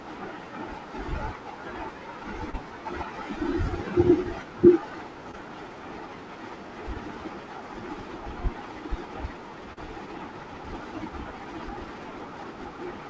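Short concealed packet loss hits three times, from 2.50 to 2.55 s, from 5.31 to 5.35 s, and from 9.73 to 9.78 s. About 40 ms, 20 ms and 40 ms of the call arrived too late to decode. The receiver patched each gap by extending the preceding sound and then blending back, which is heard as a brief smeared wobble. On a spectrogram, already capped at 8 kHz by the call path, each patch shows as a short stretch that continues the sound before it.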